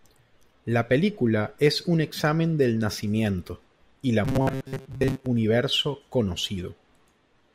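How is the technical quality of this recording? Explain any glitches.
One clear glitch spoils the speech. From 4.25 to 5.28 s, right after "del nacimiento y la", it turns into a rigid metallic buzz near 133 Hz: robotic sound from repeated short buffers. A roughly 7.5 ms chunk is likely being repeated while real audio is skipped for most of that second. Unlike dropouts, there's no silence, and the words stay roughly traceable.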